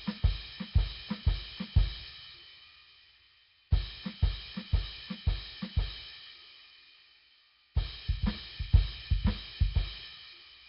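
From start to finish the music sounds rough and grainy, with a hissy fizz clinging to it and a watery, smeared texture, and nothing comes through above about 5.3 kHz. That's likely Nellymoser compression, the old Flash codec, and heavy damage at that, which fits a rate somewhere around 22 kbps. Quieter bands get no real data, so noise is filled in where detail should be.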